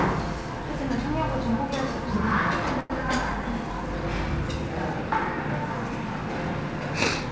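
A recording of everyday sounds, heard through a call path that leaves nothing above 8 kHz, as a wideband call codec would. From 2.80 to 2.92 s one sound hangs in place for roughly a tenth of a second, with a slight buzz or dip, before carrying on exactly where it stopped. This is a short stall from a late packet: the jitter buffer ran dry, so the receiver stretched the last audio for about 98 ms until the packet came, losing nothing but leaving everything after it about 98 ms later.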